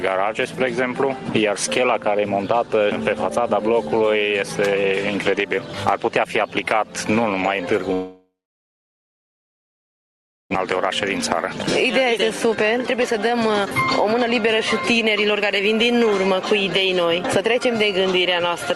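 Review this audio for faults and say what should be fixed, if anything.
From 7.93 to 10.56 s the sound drops out: the last sound carries on briefly as a fading buzz, then near-silence for about 2.2 s, and it resumes with roughly 1.6 s of material missing. This is likely a long network dropout, with delay growing by about a second. Prevention: add redundancy or FEC and a path with fewer long outages.

From 10.58 to 14.48 s the audio runs at 117% speed with unchanged pitch, trimming roughly 0.7 s. From 15.05 to 18.59 s a milder 105% trims about 0.2 s. This is jitter buffer speed-up, which cuts out short pitch-period pieces to drain the backlog. Prevention: smooth network delay so packets arrive evenly, or let the buffer drain more gradually.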